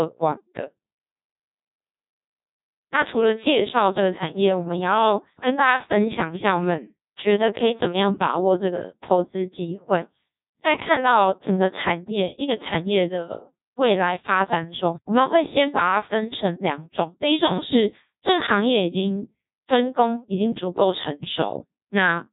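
Speech, run through a Codec 2 vocoder for the whole clip. The damage is heavy: buzzy, robotic voicing rebuilt from sine waves rather than the original waveform, with nothing above 3.8 kHz. That degree of smearing points to one of the low rates, around 1.2 kbit/s.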